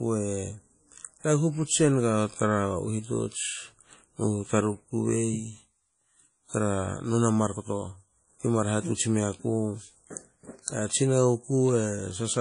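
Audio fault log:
throughout: WMA compression. The speech rings and sounds washy. A hiss swells and fades with the voice. Nothing is heard above 10.1 kHz, so the top end is dull. The likely cause is a WMA transform encoder using long blocks. Its quantisation noise smears over tens of milliseconds around each sound. Weak detail is dropped entirely. The damage is plainly audible, which fits a low bitrate of about 32 kbps.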